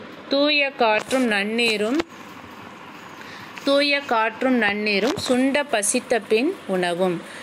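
Nothing technically wrong can be heard in this audio.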